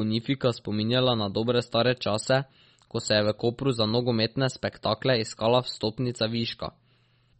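MP3 compression damage runs through the whole speech clip, with nothing above 8.4 kHz and a plainly audible watery, swirly texture, likely from an encoder starved of bits, which fits a low bitrate around 32 kbps. Weak high-frequency detail flickers on and off, and consonant attacks smear.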